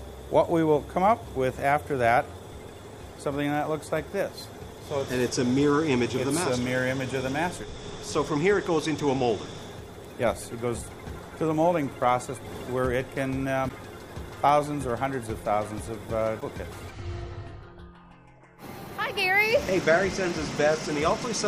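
At 13.65 to 13.71 s and again at 16.37 to 16.42 s there are short bursts of damaged data in a compressed stream, each lasting under 60 ms. In both places the encoded frames reaching the decoder were corrupt, so it could not interpret them correctly, lost frame sync, and had to scan forward for a valid header before resuming. What reaches the ear is a brief synthetic blip or chirp breaking through the sound.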